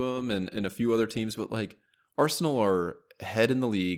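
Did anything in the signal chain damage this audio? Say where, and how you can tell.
No, nothing damaged this audio.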